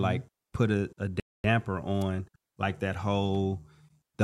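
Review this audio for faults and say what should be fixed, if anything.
Rebuffering stall from 1.20 to 1.44 s: the speech drops to silence because playback exhausted its downloaded audio, then picks up exactly where it stopped, adding 242 ms of dead air without losing anything. Prevent it by buffering further ahead before playback starts.

Electrical switching spike at 2.01 s: a sharp snap sits on top of the speech, likely a nearby switch, motor or static discharge arcing into the audio line. Prevent it by shielding and separating audio cabling from switched power.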